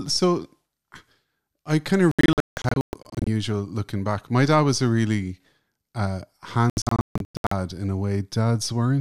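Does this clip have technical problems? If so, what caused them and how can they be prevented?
Yes. Digital broadcast dropouts occur at 2.11 to 3.27 s, after "I kind of", and at 6.70 to 7.52 s, after "was a really uh". In each, the receiver muted failed frames, leaving several short holes of up to 168 ms and 144 ms respectively. These show as flat-line gaps in the waveform and blank vertical bands on a spectrogram. A stronger, steadier signal or better antenna placement prevents this.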